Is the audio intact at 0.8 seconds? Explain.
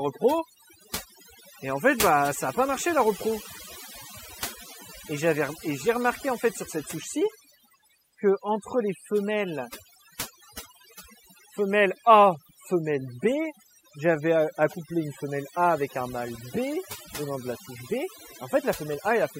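No, at 0.8 seconds you're hearing overdone noise removal, and it runs through the whole clip. The denoiser was pushed so hard it's killing frequency bands near its noise estimate, taking the quiet parts of the speech with them. So you get a lowered background that breaks up into twinkly specks.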